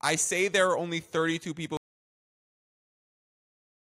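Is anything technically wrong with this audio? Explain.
Yes. From 1.77 s to the end, an audio dropout to silence: the speech stops mid-flow, likely from lost input, leaving a flat waveform and blank spectrogram.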